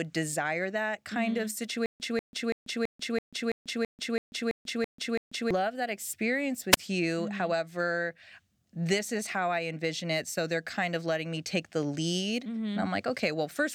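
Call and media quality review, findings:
Stutter with silent gaps, 1.86–5.51 s: the same 190 ms fragment of speech repeats 11 times, each followed by about 140 ms of digital silence, at a steady 330 ms cycle. Likely a stalled player or stream replaying its last buffer. Exact repeats plus dead-silent gaps separate it from a radio dropout.

Wireless microphone squelch dropout, 6.71–6.77 s: hiss swells, then the output mutes for about 17 ms before speech resumes. The FM signal faded and the receiver squelch closed. One short hole with no repeated audio, preceded by rising static, separates it from a buffer stutter.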